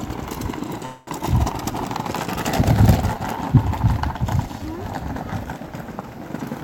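At 0.85 s the sound stalls in a call audio freeze lasting until 1.10 s. The last fragment is stretched into a fading buzz or hiss for about 218 ms, and then the audio resumes exactly where it stopped, so nothing is lost but everything after it now plays about 0.22 s later. The likely cause is packets being held up in transit while the jitter buffer ran dry. On a spectrogram, this shows as the final spectral shape smeared horizontally and dimming, with no new onsets. The waveform shows a decaying, repetitive patch instead of a true silence.

Shortly after, around 1.19 to 1.23 s, comes a skip ahead. Roughly a tenth of a second of audio is dropped, and the two sides are butted together with only a 6 ms seam. It happens because a stretch of audio was discarded while later audio was already queued, which also claws back about 0.1 s of the delay the freeze added. On a spectrogram, this appears as an abrupt vertical discontinuity where partials jump to new positions. 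In the waveform, it can show as a small step or a sudden shift in the envelope.

Two jitter buffer slow-downs follow. The first runs from 3.15 to 3.70 s and adds 38 ms, playing at 94% speed. The second runs from 4.15 to 4.84 s and adds 64 ms, at 92% speed. In both, the receiver repeated single pitch periods or slivers of quiet to rebuild its reserve. This drags sounds out at an unchanged pitch. A spectrogram shows events stretched wider in time with harmonics held level, and the waveform shows near-identical cycles repeated back to back.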